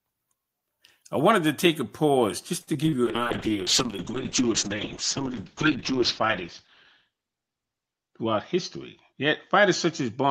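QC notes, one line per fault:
2.61–2.94 s, repeated packet loss (robotic sound): four gaps, longest 61 ms, patched by extending prior sound, so about 37% of the span turns choppy.
3.06–10.30 s, call bitrate drop: bitrate falls from 48 to 7 kbps, bandwidth narrows from 20 to 8 kHz, leaving coarse, muffled sound until the end.
8.02–8.56 s, jitter buffer speed-up: excess buffered audio trimmed by removing short pitch-period pieces, roughly 40 ms total, so sound runs about 6% fast at unchanged pitch.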